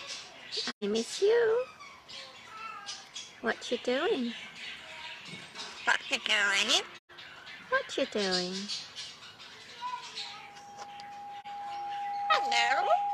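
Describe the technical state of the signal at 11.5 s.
At 11.5 s there's loudspeaker feedback squeal going on: from 10.18 s to the end, a mic is hearing its own speaker and the loop gain tops one at 812 Hz, so that tone swells over a couple of seconds into a steady whine sitting about 5 dB above the actual sound.

Right before that, from 11.40 to 11.46 s, you get AAC frame loss with muting. About 43 ms drops out, which fits a single lost frame zeroed by the decoder, and the overlapping windows fade it out and back in, so it's a brief dip.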